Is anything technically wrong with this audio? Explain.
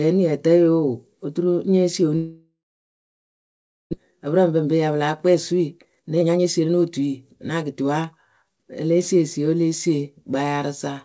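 Yes, there are two faults in this speech clip.

From 2.16 to 3.95 s there is a long network dropout. The last sound is stretched into a fading buzz, then about 1.35 s of near-silence follows, and speech resumes with roughly a second missing. The likely cause is audio that stopped arriving, with the receiver filling the gap before giving up.

From 5.28 to 8.73 s the speech sounds hurried but keeps its pitch, running at 121% speed. This is a jitter buffer speed-up: the receiver trimmed many short pitch-period slices, around 0.7 s in total, to shrink excess buffered delay.

The band stops at 8 kHz, which fits the G.722 call codec.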